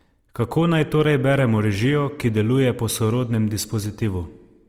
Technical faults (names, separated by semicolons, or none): Opus compression